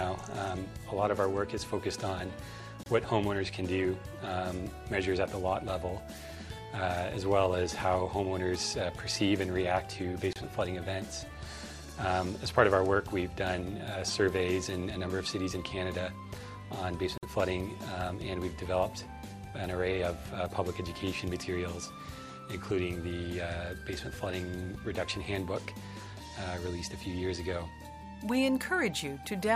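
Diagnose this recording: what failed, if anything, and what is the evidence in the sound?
Codec stage: gaps at joins of encoded pieces, 28 to 51 ms, at 2.83, 10.33 and 17.18 s. Untrimmed encoder delay and padding leave blank vertical spectrogram stripes.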